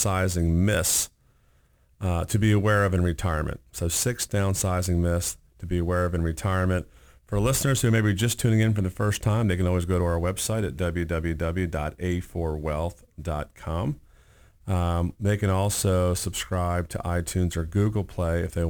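From start to finish the speech carries the mark of crude rate conversion. The sound fits a change from 44.1 kHz to 48 kHz done by repeating the nearest sample rather than filtering. This leaves a periodic error roughly 20 dB below the speech, heard as a gritty, inharmonic fizz riding on louder and brighter syllables. A spectrogram would show faint aliased lines and images that don't follow the voice's harmonics, and the waveform would show small stair-step repeats.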